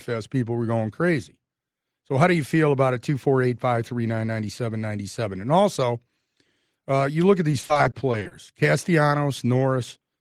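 From 7.51 to 8.33 s, just after "uh you look at", the speech breaks up with repeated packet loss (robotic sound). Roughly ten short gaps, none longer than 40 ms, arrive in quick succession. Each is filled by extending the preceding audio, so about 240 ms, close to 29% of the stretch, is synthetic continuation. The repeated patching gives the voice a choppy, robotic quality with fragments missing.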